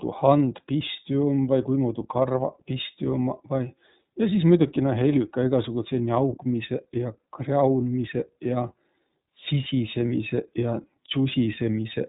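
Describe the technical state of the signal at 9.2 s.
At 9.2 s, as throughout, iLBC codec damage is plainly audible: a spectrogram shows a hard ceiling near 3.8 kHz, and the independently coded frames (consistent with 30 ms) give speech a rough, synthetic edge.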